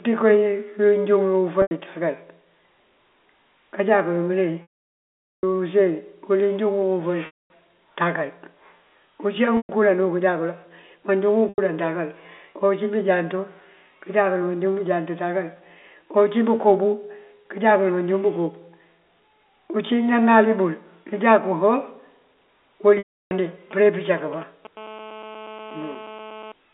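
Packet loss with pitch repetition breaks the speech six times: 1.62 to 1.71 s, 4.62 to 5.43 s, 7.26 to 7.5 s, 9.57 to 9.69 s, 11.49 to 11.58 s, and 22.98 to 23.31 s. Audio went missing and the receiver looped the last pitch period to fill the gaps. The 90 and 120 ms gaps sound like a briefly held, buzzy tone. The 810 ms gap at 4.62 s fades to silence, as do the 240 and 330 ms ones. The speech then returns through a short cross-fade.

GSM signalling bursts follow from 23.71 to 24.67 s. A nearby 2G phone is signalling the network in short groups of radio bursts. The audio circuit rectifies them. The result is a galloping dit-dit-dit of brief 217 Hz buzzes, around 20 dB below the speech.

GSM phone buzz runs from 24.77 to 26.52 s. The phone is now transmitting steadily, as in a call, pulsing 217 times a second. Rectified, this gives a hard, raspy 217 Hz buzz, rich in harmonics, about 20 dB below the speech. 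It sits inside a telephone band of 250 Hz to 3.6 kHz.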